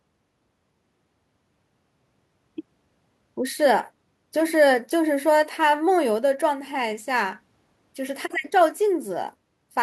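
No technical faults are audible.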